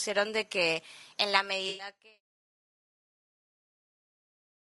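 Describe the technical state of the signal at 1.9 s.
At 1.9 s the signal has just come out of a gap. AAC frame loss with concealment ran from 1.69 to 1.87 s, about 100 ms of missing audio, which fits roughly five lost frames. The decoder filled that gap by reusing the last good spectrum. The patch sounds smeared and noisy, not cleanly silent.

The whole clip also has a rough, grainy speech texture. Noise sits between the harmonics and the top band sounds thin and synthetic. That is plainly audible damage, likely from low-delay AAC compression (AAC-ELD), and fits a bitrate around 32 kbps. The level is also falling here in a smooth fade-out that begins around 1 s and reaches its end at 2.21 s.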